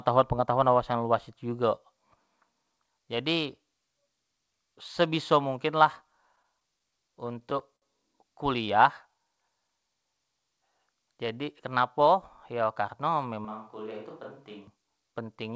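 Repeated stalls (stutter) run from 6.36 to 7.84 s in this speech recording, which has passed through a call codec whose band stops at 8 kHz, consistent with G.722. Packets kept reaching the receiver late, so its jitter buffer emptied ten times in that span. Each time the last sound was stretched to bridge the wait, filling 144 ms in total, with the longest hold 58 ms. Nothing is lost, but about a tenth of the span is held-over sound, so the delivery drags and hiccups. A jitter buffer slow-down follows from 8.56 to 9.43 s. With its reserve running low, the receiver repeated single pitch periods to build it back up, adding 68 ms, so the speech plays at 93% speed at unchanged pitch and sounds drawn out. The reverse happens from 11.40 to 12.82 s as a jitter buffer speed-up. The buffer held more audio than its target, so short pitch-period slices were cut, around 70 ms altogether, and the speech runs at 105% speed, still at the same pitch but audibly hurried. 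From 13.45 to 14.68 s the sound abruptly turns roomy and hollow, loses bass, drops roughly 5 dB in level and reveals background noise about 35 dB below the speech. It changes back just as suddenly. This points to a switch to a distant microphone, likely because the close microphone's signal dropped out and a farther one, such as a camera's, covered the gap.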